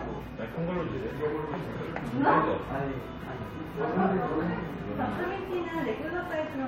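There are no technical faults to describe in this audio, at any point in time.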